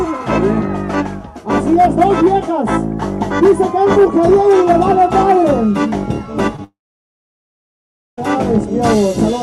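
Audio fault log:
6.56–6.59 s, short concealed packet loss. A brief smear or wobble lands here. About 10 ms of audio did not reach the decoder in time. The receiver covered the gap by stretching the sound just before it, carrying on its pitch or its noise shape for about 16 ms. It then crossfaded back into the real signal. The patch is guessed, not real, so it sounds blurred.
6.64–8.18 s, long network dropout. The sound just before the break is drawn out into a short buzz or hiss that fades away. Then about 1.43 s of silence follows. The audio returns at 8.18 s with a stretch missing, and nothing is replayed to cover it. The likely cause is a network stall that left about 1.54 s undelivered. The receiver's concealment faded out quickly and then could only fill the rest with silence.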